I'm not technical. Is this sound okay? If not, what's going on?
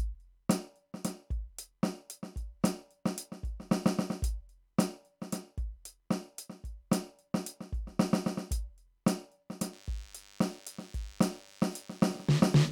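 No. DECT cordless phone buzz starts at 9.73 s and runs to the end of the music. A nearby cordless phone or its base sends radio pulses 100 times a second, and the audio equipment picks them up as a thin, steady buzz beneath the music.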